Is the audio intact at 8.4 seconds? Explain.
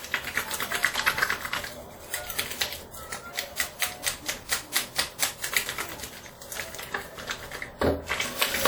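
No. Throughout the clip, including 8.4 s, the sound rings and washes, with hiss that breathes alongside it. This is likely WMA compression at a low bitrate, consistent with 48 kbps. Long transform blocks smear quantisation noise over tens of milliseconds and zero weak components. A spectrogram shows blurred onsets and patchy holes.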